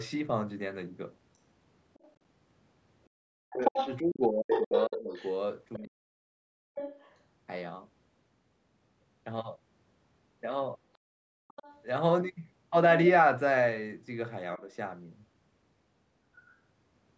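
From 1.94 to 2.12 s, the other side's voice leaks through, likely because the echo canceller left residual loudspeaker echo in the microphone signal. It is a faint scrap well below the speech.

From 3.38 to 6.56 s, speech is suppressed in double talk, likely because the canceller could not separate the talker from the echo and turned both down. For roughly two seconds in total, the voice dips and drops out in pieces, at its deepest by roughly 40 dB. Within that span, from 3.64 to 5.79 s, the other side's voice comes through almost as loud as the talker, likely the same residual echo.

From 6.75 to 7.16 s, the other side's voice leaks through again, likely as residual echo, clearly audible but quieter than the speech.

From 11.07 to 11.48 s, the background is gated by the echo canceller. It clamped the microphone while the loudspeaker played, so the room sound drops by about 38 dB for roughly 0.4 s. 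As it returns, from 11.48 to 11.82 s, the other side's voice leaks through, likely as residual echo, a faint trace.

From 14.58 to 14.68 s, speech is suppressed in double talk, likely by the canceller, causing a brief, shallow dip of a few decibels.

At 16.5 s, a last faint scrap of the other side's voice leaks through, likely as residual echo.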